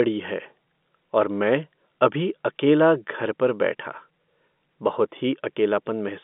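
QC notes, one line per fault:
No faults heard.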